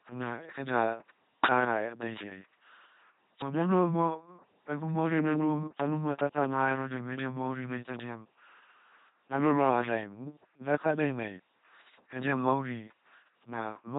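The speech runs through an LPC-10 vocoder from start to finish. Every moment is rebuilt as either a pulse-driven buzz or a noise-driven hiss through a small all-pole filter. The result is a flat, mechanical robot voice. Where the voiced or unvoiced choice goes wrong, buzz and hiss swap places. The damage is heavy, consistent with the 2.4 kbit/s rate. Nothing remains above about 3.9 kHz.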